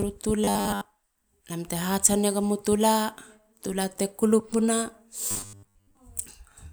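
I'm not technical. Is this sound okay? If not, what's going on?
No. From 0.44 to 0.86 s and 5.29 to 5.97 s the speech becomes a flat metallic buzz near 100 Hz. This is robotic sound from repeated short buffers, likely from a 10 ms slice being replayed while most of the real audio is skipped.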